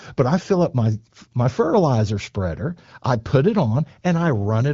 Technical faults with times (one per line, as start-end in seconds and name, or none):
none